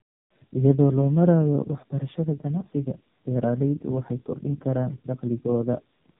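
From start to finish the speech carries tandem speech coding. It was decoded and re-encoded by two low-rate speech codecs in a row, which fits an iLBC leg followed by AMR-NB at around 7.4 kbit/s. Each stage worked on already damaged speech, so it sounds rough, muffled and warbly. A spectrogram shows nothing above 3.8 kHz and smeared, blotchy harmonics.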